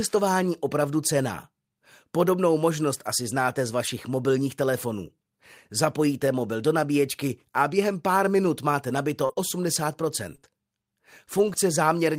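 From 3.87 to 3.89 s, about 20 ms of speech sounds briefly rougher and noisier, with no gap. This is a lost packet rebuilt from error correction. The packet after it carried a low-bitrate copy, and the decoder played that copy instead.

Between 9.25 and 11.56 s there are scattered short gaps, about four of them. Around 100 ms is missing, and the longest gap is roughly 40 ms. The receiver patched each hole by continuing the last sound. This leaves brief ticks, smears and hiccups.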